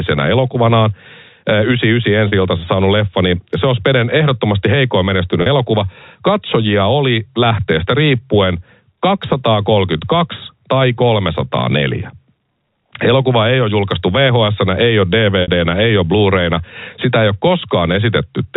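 Gain pumping runs throughout: loud and soft parts are squashed closer together, with the gain swinging by around 5 dB, likely from excessive input gain driving a fast limiter. Packet loss with pitch repetition occurs at 2.28 s, just before "iltansa saanut leffa niin", and at 5.42 s, after "ehdottomasti heikoin". Each is a 40 ms gap, consistent with two lost 20 ms packets, bridged by a briefly held, buzzy repeated pitch period. A longer 60 ms loss at 15.42 s, between "julkaistu vhs ei ole" and "ei ole", fades the repeated pitch into silence before speech cross-fades back in, all within the telephone band that stops at 4 kHz.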